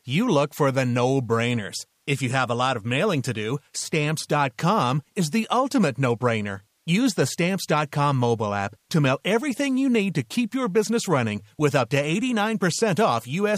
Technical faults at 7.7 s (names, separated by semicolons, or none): none